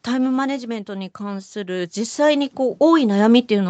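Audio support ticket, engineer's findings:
Automatic gain falling, 0.05 to 0.92 s: speech and background sink together by about 4 dB. Probable component: capture-side AGC. Opening level read as too loud, so gain was pulled down gradually rather than instantly.

Automatic gain rising, 0.86 s to end of clip: speech and room noise swell together over roughly three seconds. Same AGC, now judging input too quiet and ramping gain back up. Band tops out at 8 kHz, normal for call mic processing.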